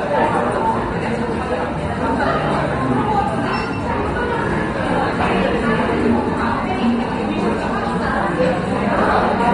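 A recording of everyday sounds carrying AAC compression damage from start to finish: nothing exists above 9.7 kHz, so it sounds dull, and coding artefacts are plainly audible. A spectrogram shows a flat, hard ceiling at 9.7 kHz. The likely cause is AAC-LC encoding at a low bitrate, which fits about 32 kbps.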